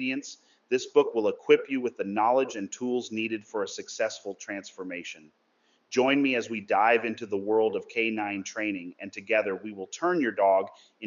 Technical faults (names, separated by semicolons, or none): none